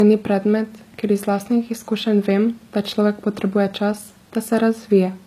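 Throughout, the speech has nothing above 14.9 kHz. This is likely low-bitrate audio saved at a high bitrate, so the MP3 cannot restore the detail lost earlier.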